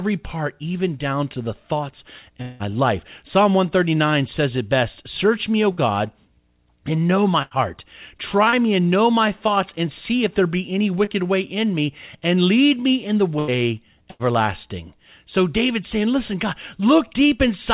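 A speech recording carried over a call path whose band stops at 4 kHz, which fits G.711 mu-law at 64 kbps, and it has three kinds of gap. The longest comes at 2.42 to 2.63 s, just after "down to the thoughts". For roughly 0.18 s the last sound is carried on as a buzz or hiss that fades, and the speech then resumes with that stretch gone. This is likely a long network dropout. It differs from the shorter bursts because the held sound lasts long enough to be heard decaying, though it never falls fully to silence here.

Four briefer holes are a burst of packet loss each: 5.72 to 5.80 s, 7.42 to 7.54 s (right after "and know my"), 13.39 to 13.51 s, and 14.11 to 14.22 s. Between 60 and 90 ms is missing in each. The receiver holds the preceding sound and turns it down, so a voiced stretch becomes a brief steady buzz and anything else a thinning hiss before the speech jumps ahead. These are too short to settle into quiet.

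Two tiny faults are short concealed packet loss, where about 30 ms never arrived. One is at 8.50 to 8.55 s, just before "me and know my". The other is inside 11.04 to 11.24 s, where a little time is also added. In each, the decoder extends the last sound from its pitch or as shaped noise and blends back in. The result is a quick smear or wobble, not an audible held buzz, and this is what separates them from the bursts.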